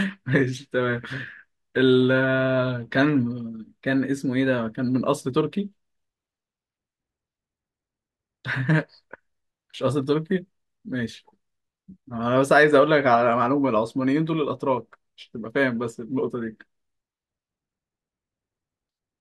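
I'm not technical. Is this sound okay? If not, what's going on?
Yes, nothing sounds wrong.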